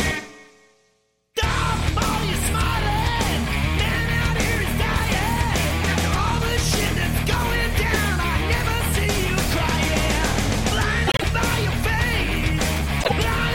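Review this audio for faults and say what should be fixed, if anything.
Around 11.07 to 11.24 s and again from 13.00 to 13.12 s, the audio breaks into a brief garbled flutter. These are frames out of order. Two adjacent blocks of about 52.2 ms (first event) and 26.1 ms (second) were decoded in swapped order, which fits two frames per block and then one. The halves play exchanged, but no time is lost. To prevent it, reorder packets by sequence number in the receive buffer before decoding.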